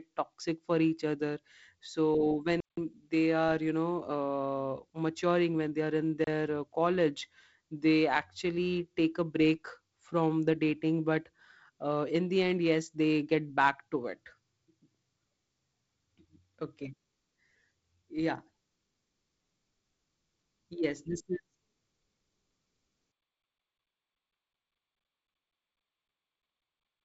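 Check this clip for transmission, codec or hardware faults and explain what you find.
Two dropouts of digital silence interrupt the speech, at 2.60 to 2.77 s and 6.24 to 6.27 s. Each is a block of digital silence, most likely where the playback or processing chain failed to deliver samples in time and zeros filled the slot. The first, about 170 ms, fits a missed 8192-sample buffer and is heard as a distinct hole. The second, about 30 ms, is a brief hole. Both start and stop abruptly, with no fade. The band-limited sound up to about 7.7 kHz fits G.722 wideband coding, likely at 48 kbit/s, with light coding noise.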